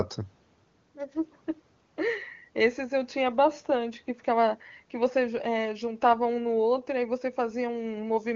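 No faults found in this speech clip; it has passed through AMR wideband (HD Voice) coding, and the lack of roughness or rasp in the sound points to one of the codec's highest rates, near 23.85 kbit/s, where coding damage is faint at most.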